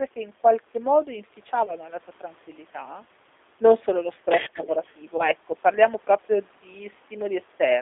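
Throughout, the speech carries G.729 codec damage: the band is confined to about 300 Hz to 3.6 kHz, and the 8 kbit/s model-based rebuilding leaves a rough, synthetic edge rather than plain muffling. At 1.66 to 1.76 s, VoIP packet loss concealed by the speech codec stretches the sound into a buzzy tone or coloured noise that fades. This fits a single lost 20 ms packet, and it differs from a clean dropout because it is smeared rather than silent. From 4.84 to 4.93 s a very faint delayed copy trails by 173 ms, most likely an echo leak through a far-end loudspeaker that the echo canceller failed to remove, heard as a separate later repeat rather than reverb. At 5.17 to 5.29 s the same concealment stretching and fade recurs, again pointing to one lost 20 ms packet.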